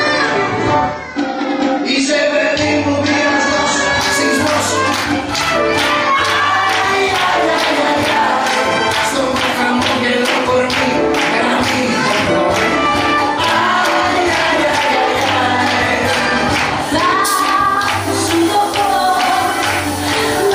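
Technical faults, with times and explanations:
0.0 to 4.0 s, adaptive stream starting at a low bitrate: for the first four seconds nothing is present above 8.5 kHz and codec artefacts are heavier, a sound that fits a stream around 24 kbit/s. At 4.0 s the treble and clarity return at once, consistent with a step up to about 96 kbit/s once the player had gauged the connection. Unlike a dropout or rebuffer, the change happens with no gap or stall.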